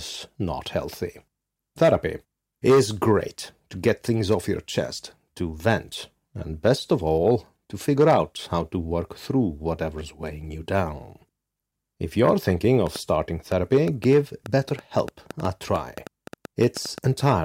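Interference from nearby equipment or a faulty connection is likely injecting repeated pulses, producing a train of clicks from 12.87 to 16.99 s, just after "you're thinking". About twenty similar pops arrive unevenly, near 5.6 per second, poking out roughly 5 dB above the speech, gaps included.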